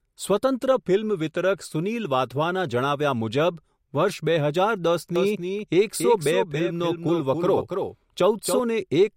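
A second, slower capture path or an edit holding two out-of-step copies likely caused a doubled audio track from 5.16 to 8.60 s. The speech repeats about 300 ms late and about 5 dB quieter, with no reverb tail, and the copy cuts in and out abruptly.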